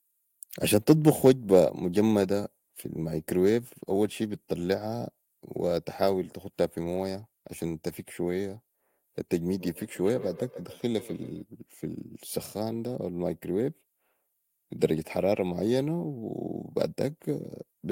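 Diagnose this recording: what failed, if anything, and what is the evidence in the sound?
Call processing failed: from 9.59 to 11.47 s there is feedback echo between two devices, with the speech returning at roughly 150 ms intervals, up to about 14 dB below the direct sound. A second device's loudspeaker is feeding the microphone, outside the reach of the echo canceller. The fixed, regular repeat spacing rules out room reverberation.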